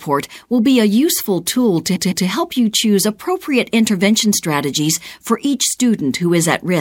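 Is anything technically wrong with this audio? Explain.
Yes. Repeated frames occur from 1.95 to 2.26 s. A block of compressed audio about 157 ms long was decoded three times in a row, which fits a run of roughly six frames. The speech stutters, and the clip is about 0.31 s longer.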